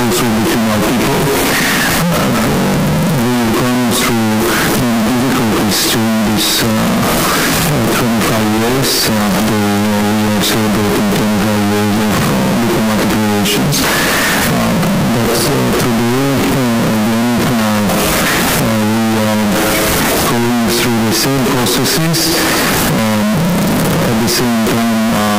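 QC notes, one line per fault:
Throughout: float read as integer. The waveform sits as a near-square block at an almost fixed, high level, very loud and harsh. Quiet background noise is as loud as the main sound. This likely comes from 32-bit float samples being read as 32-bit integers, so sign and exponent bits set the level.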